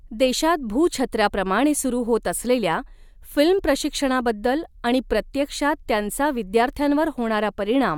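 No technical faults are audible.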